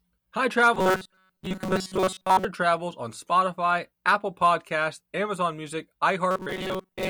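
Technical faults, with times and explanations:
0.74–2.45 s (ending just before "travels on") and 6.31–7.09 s, robotic sound from repeated short buffers: the speech becomes a rigid metallic buzz locked at 188 Hz, likely from a roughly 5.3 ms buffer being replayed for most of the time. Unlike a stutter, its steady imposed buzz follows the voice only roughly.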